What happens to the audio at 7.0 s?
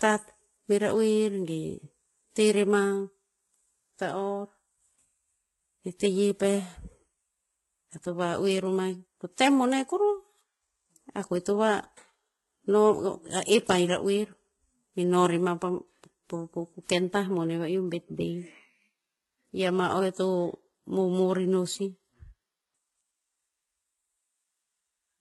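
At 7.0 s the speech carries transcoding between lossy codecs, a fault present across the whole clip. Nothing sounds above 11.8 kHz. The sound has the smeared, swirly texture of a very low-rate codec like HE-AAC near 16 kbit/s. It also has a second layer of grainy, warbling artefacts. The likely cause is a chain of codecs ending in WMA 1 at a higher rate, which spent its bits re-encoding the earlier damage and added its own.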